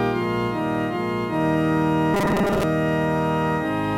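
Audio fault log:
2.14–2.63 s, robotic sound from repeated short buffers: a rigid metallic 200 Hz buzz, likely from a 5 ms chunk replayed in place of about half the audio.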